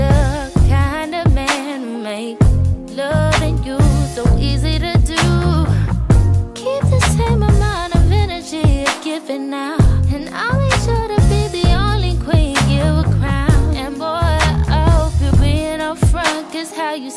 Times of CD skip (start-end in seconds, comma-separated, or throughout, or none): none